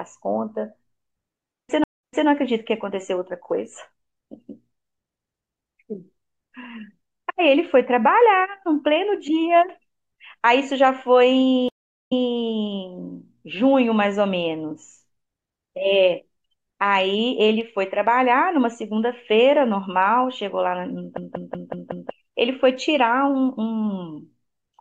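At 1.84 s and again at 11.69 s the speech goes silent for 152 ms, then 389 ms, and picks up 288 ms and 192 ms earlier than where it stopped. This is a stream reconnect: the connection dropped, the player restarted its decoder mid-stream, and the server resent a burst of audio. From 21.18 to 22.11 s a 186 ms fragment repeats exactly five times as a stutter at about 5.4 Hz. This is a system hang loop: the machine froze while the sound hardware kept cycling one ring buffer, which fits an 8192-sample buffer, and about a second of audio is lost.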